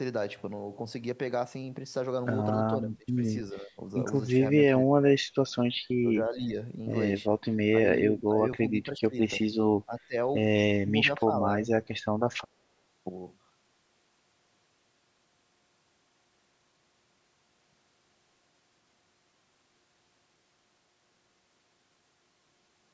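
Speech suppressed in double talk, likely from an echo canceller ducking the near talker while the far side speaks, dips the speech at 2.81–3.2, 3.53–3.78, 4.7–5.37, 6.0–6.56, 7.68–9.17, 9.85–10.15 and 10.74–11.68 s. The level drops by about 15 to 35 dB, deepest around 4.7 s.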